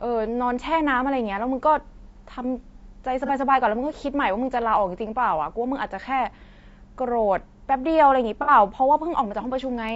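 Throughout, the speech sounds rough and grainy, with a hiss filling the gaps between harmonics and a thin, synthetic-sounding top band. This is likely low-delay AAC compression (AAC-ELD), whose short frames resolve pitch poorly and starve the coder at what sounds like around 32 kbps.

At 3.26 to 3.31 s a brief smeared, noisy patch of about 30 ms appears, and at 8.42 to 8.51 s a longer one of about 60 ms. This is AAC frame loss with concealment. The decoder patched the missing frames, one and then two, by reusing the last good spectrum.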